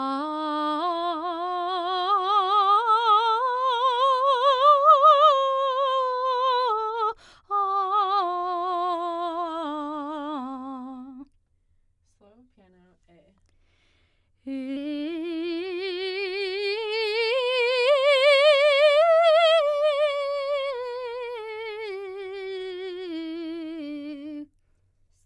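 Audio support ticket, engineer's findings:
Music jumps sharp and rushed from 14.77 s to end of clip: pitch up about 1.5 semitones, tempo 1.09x faster, both shifting together. Probable component: playback clock / resampler stage. Wrong sample rate, unconverted samples clocked out too fast. Ratio fits 22 kHz material played back at 24 kHz. First 14.77 s at correct pitch and tempo.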